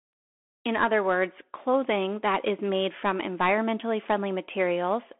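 The whole clip passes through a Bluetooth CVSD headset codec. The speech sits in a narrow telephone band, roughly 250 Hz to 3.4 kHz. Nothing reaches above 3.8 kHz. CVSD codes each sample as a single up-or-down bit, which fits a 64 kbps link, and its step size must keep adapting. Fast, loud high sounds outrun that step and distort. S sounds turn scratchy. A grainy hiss runs under the speech. The damage is plainly audible.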